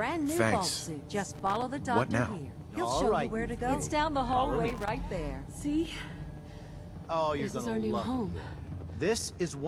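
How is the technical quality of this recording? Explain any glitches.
Two short bursts of loose connector crackle mar the recording, at 1.32 to 1.62 s and 4.68 to 4.89 s. A dirty or worn contact flickers open and shut, chopping the signal into irregular scratchy crackle, unlike the steady, evenly scattered ticks of disc surface noise.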